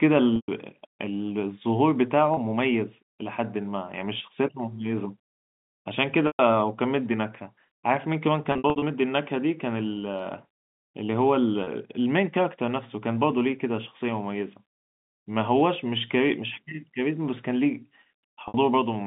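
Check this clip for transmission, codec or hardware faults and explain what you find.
Packet loss with pitch repetition occurs six times: at 0.36–0.48 s (120 ms), 2.34 s (30 ms), 6.27–6.39 s (120 ms), 8.52–8.82 s (180 ms lost in scattered gaps of up to 60 ms), 11.64 s (30 ms) and 18.48–18.54 s (60 ms). The receiver bridges each gap by repeating the last pitch period. The 30 ms gaps sound like a briefly held, buzzy tone. The 120 ms gaps fade toward silence before the speech cross-fades back. On a spectrogram, each gap shows frozen, evenly spaced harmonic lines that then fade out. On a waveform, identical repeated cycles shrink in amplitude. Throughout the clip, the narrowband telephone coding holds the sound to roughly 150 Hz–3.7 kHz.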